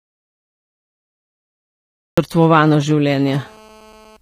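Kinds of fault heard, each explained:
HE-AAC compression: The treble across the whole clip has that rebuilt quality where the top end is bright but not quite real, so s sounds come out gritty and lispy, and the harmonics up high don't line up with the ones below. That's likely HE-AAC, which codes the lower spectrum and copies it upward to fake the treble. The damage is plainly audible, which fits a low bitrate somewhere around 24 kbps.
Audio dropout to silence: The clip opens in dead digital silence with no room tone at all, and that silence is already under way from the start, running until about 2.18 s when the speech cuts in mid-flow. That's an audio dropout to silence. The likely cause is the input getting lost, through a disconnect, a failed link or a stray mute, while the recorder kept writing silence. Whatever was said in that stretch is simply gone.
GSM signalling bursts: From about 2.43 s to 3.3 s there's a galloping dit-dit-dit of short buzzes sitting roughly 25 dB under the speech. 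Those are GSM signalling bursts: a nearby 2G phone firing off brief groups of radio bursts while it sets something up, and the audio circuitry rectifying them into sound. The buzz inside each group runs at about 217 Hz, the phone's burst rate, and it's completely unrelated to the speech.
GSM phone buzz: Right after the bursts stop, from about 3.31 s to 4.17 s, it turns into a steady, hard, raspy buzz at 217 Hz packed with harmonics, about 30 dB below the speech. That's GSM phone buzz, the same phone now transmitting continuously at 217 bursts a second, as it does during a call, with the audio path rectifying each radio pulse. The switch from galloping bursts to a constant drone is the giveaway.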